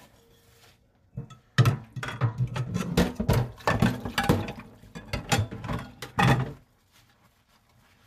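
Everyday sounds, with no technical faults to report.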